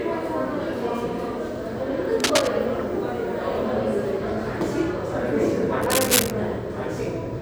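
At 2.2 to 2.49 s and again at 5.8 to 6.31 s, cable scratch noise breaks in as harsh rustling roughly as loud as the sound itself, likely from a worn connector shifting. A spectrogram shows dense broadband smears; the waveform shows ragged, uneven bursts.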